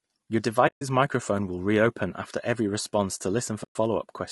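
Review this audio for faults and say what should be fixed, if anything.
The whole clip sounds rough and grainy. Noise fills the gaps between the pitch harmonics, and the top band sounds thin and synthetic. This is plainly audible low-delay AAC compression, likely AAC-ELD at a low bitrate, which fits about 32 kbps. Its short frames cannot separate harmonics well. They also spend more bits on side information, so detail is lost. To prevent it, raise the bitrate or use a longer-frame codec when low delay is not critical.

There are two soft-edged holes from AAC frame loss with muting. The first runs from 0.67 to 0.82 s, about 140 ms, just before "microphone will reopen after". The second runs from 3.63 to 3.76 s, about 120 ms, just after "after every response to". Lost frames were decoded as silence. The overlapping windows fade the sound out and back in. To prevent it, add packet-loss concealment or forward error correction on the transport.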